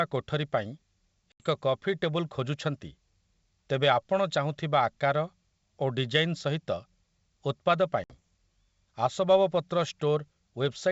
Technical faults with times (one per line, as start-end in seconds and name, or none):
1.32-1.44 packet loss on an ADPCM call
8.04-8.13 packet loss on an ADPCM call